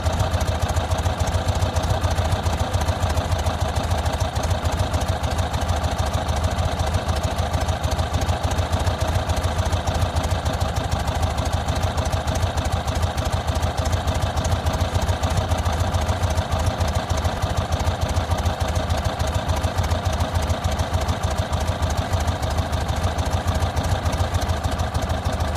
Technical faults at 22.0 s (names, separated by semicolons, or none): damaged data in a compressed stream